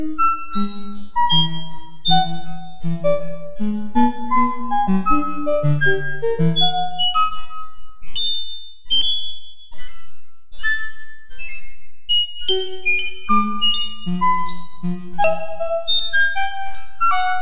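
No technical faults can be heard anywhere in this recording of sounds.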